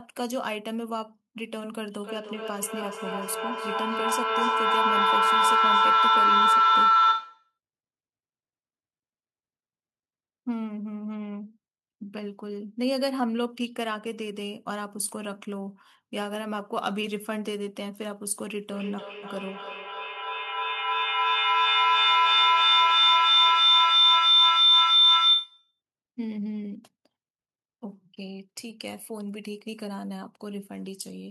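Feedback howl runs from 2.03 to 7.58 s near 1.5 kHz, about 11 dB above the speech, and from 18.72 to 25.81 s near 4 kHz, about 13 dB above. A microphone-loudspeaker loop builds it, pulsing roughly every 300 ms: a bright spectrogram line, swelling waveform.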